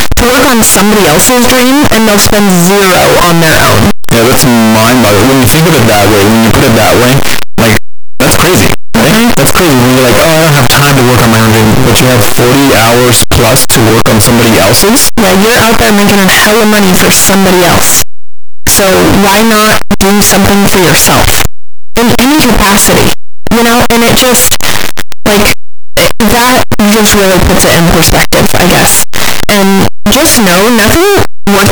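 From start to finish the speech is buried in very loud, harsh distortion, with soft sounds as loud as strong ones, likely from a signed and unsigned mix-up in the 8-bit samples. The waveform jumps across the whole range at each zero crossing, and the spectrogram shows dense broadband energy everywhere.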